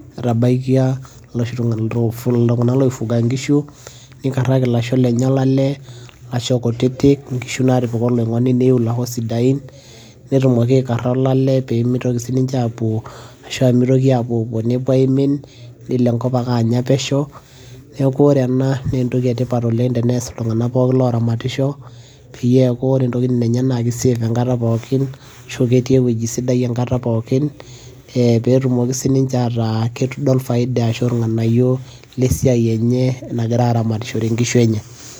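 No technical faults can be heard at any point in the recording.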